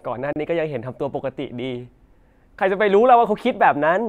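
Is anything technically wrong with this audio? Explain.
Yes. From 0.33 to 0.36 s the speech drops to about 33 ms of silence and resumes, a Bluetooth stall, likely a drained headphone buffer awaiting resent packets.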